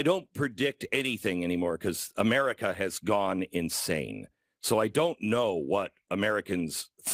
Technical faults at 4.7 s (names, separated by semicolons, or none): none